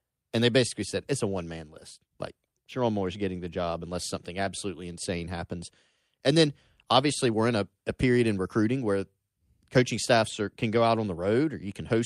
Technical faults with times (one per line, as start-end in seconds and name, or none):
none